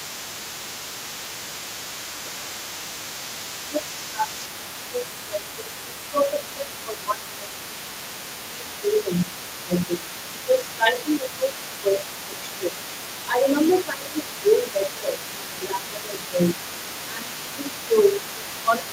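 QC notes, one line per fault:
throughout: other side's voice leaking through. There's a second voice under the talker for the whole clip, sitting about 15 dB down, quiet but always there once you notice it. That's likely the far end playing out of the talker's loudspeaker and getting back into the mic, with the echo canceller only taking part of it out. The rest rides along with the near-end speech, so you hear both at once.
3.68 to 7.8 s, 8.48 to 12.86 s, 13.27 to 16.6 s, and 17.07 s to the end: speech suppressed in double talk. In each stretch the talker's level sags by up to roughly 10 dB, adding up to around three seconds of dipped speech per stretch in the first three. The cause is likely both sides talking over each other, with the canceller unable to tell its own talker from the echo and turning the whole lot down together.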